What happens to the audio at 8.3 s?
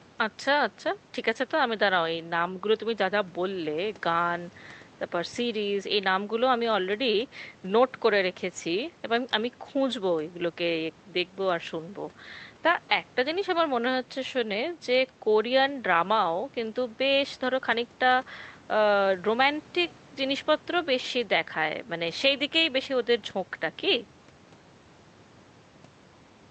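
Nothing goes wrong at 8.3 s; the speech carries straight through that moment with no dropout, click, distortion or other fault.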